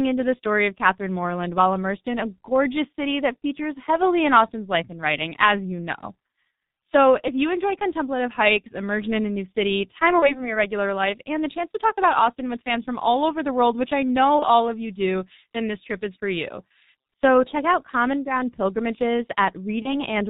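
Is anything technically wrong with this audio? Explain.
Yes. The whole clip has been through the G.723.1 codec, and there are three dropouts handled by packet loss concealment.

The G.723.1 codec is present throughout. The damage is heavy, and it fits a rate of about 6.3 kbit/s. The codec models speech in 30 ms frames and discards everything above 4 kHz. Its voice model updates slowly. The speech sounds muffled and hoarse. Consonants are smeared, and sharp onsets lose their edges.

VoIP packet loss concealed by the speech codec occurs three times. The first runs from 10.19 to 10.52 s, after "a new city time" and before "regular life and the". The second runs from 14.39 to 14.45 s, after "world which I know" and before "of you do then". The third runs from 19.82 to 19.94 s. Each fits one lost 30 ms frame. The decoder filled each gap by repeating its last pitch and filter at falling gain. 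That produces a brief buzzy tone or coloured noise that fades. Because each frame builds on the previous one, the voice stays weak or distorted after the gap. At 10.19 s this lingers well past the lost frame.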